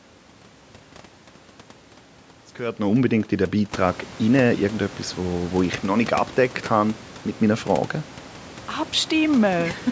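No technical faults are present.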